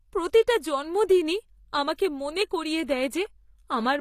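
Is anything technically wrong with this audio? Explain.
Yes. Throughout the speech, likely HE-AAC compression rebuilt the treble from copied lower bands, so sibilants sound gritty and metallic, and nothing sounds above 14.9 kHz.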